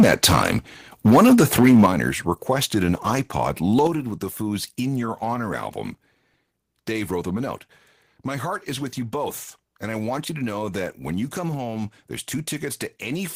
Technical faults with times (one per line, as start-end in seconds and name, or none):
1.05-1.86 microphone overload
1.86 microphone volume stepped down
3.87 microphone volume stepped down